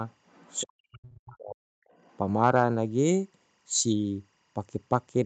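Throughout the speech, faint timecode bleed chirps behind it, about 45 dB down: a 24 frames-per-second code switching between roughly 1 and 2 kHz tones. From 0.11 to 0.64 s, the other side's voice leaks through, about 30 dB below the talker, likely because an echo canceller left loudspeaker sound in the microphone. From 0.64 to 1.81 s, speech is suppressed in double talk, likely by an echo canceller ducking both voices. The talker dips in pieces, as deep as about 40 dB, for around a second in total. From 1.88 to 2.17 s, the other side's voice leaks through again, roughly 35 dB down.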